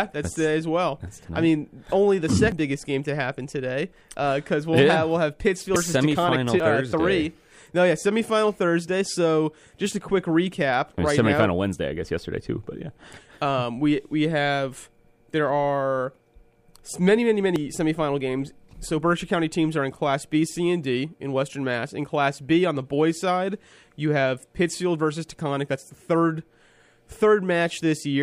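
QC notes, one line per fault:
2.52, 5.76, 6.6 and 17.56 s, dropped buffer (overrun): at each spot the sound jumps straight ahead, with no gap or silence in between. The skip is about 70 ms at 2.52 and 17.56 s, around 100 ms at 5.76 s, and only about 40 ms at 6.6 s. The likely cause is that the recording side didn't pick up its audio in time, so a chunk got overwritten and the two sides were butted together.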